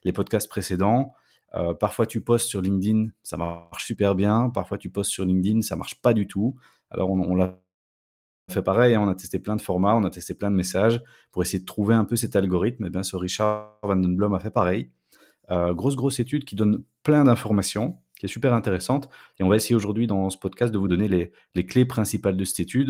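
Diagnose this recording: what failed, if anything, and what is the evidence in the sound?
Call audio freezes at 3.43–3.75 s, 7.45–8.51 s (after "on l'a", fading to silence) and 13.45–13.86 s (after "eh bien ce"). Each is a fading buzz or hiss, then speech resumes intact rather than skipping, so this is likely a network delay that emptied the jitter buffer, not packet loss.

A jitter buffer speed-up runs from 17.1 to 21.19 s, between "qui donne" and "les clés principales de". Speech runs about 8% fast at unchanged pitch, unlike a resampling error, as pitch periods are trimmed, roughly 0.3 s in all.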